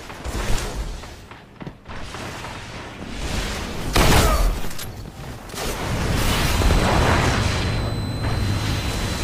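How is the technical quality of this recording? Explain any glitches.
The recording has one clear fault: a switching supply whistle from 6.43 s through to the end. A switching power supply in the signal chain drops into an audible burst mode, or beats against another supply, so its switching activity lands inside the audio band. The result is a thin, high whistle near 4 kHz, wandering slightly between about 4.01 and 4.08 kHz, sitting roughly 20 dB below the main signal.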